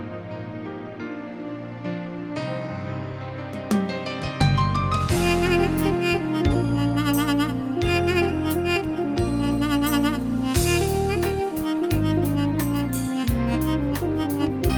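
Nothing here stands out as a fault, so there's really nothing to walk through in time order.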